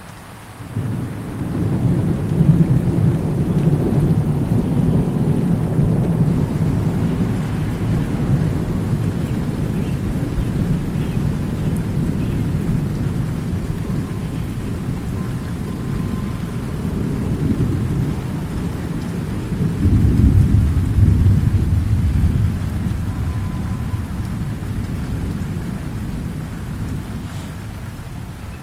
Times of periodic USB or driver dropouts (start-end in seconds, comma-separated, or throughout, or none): none